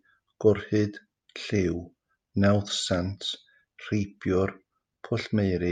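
Speech recording, no audible technical faults anywhere in the clip.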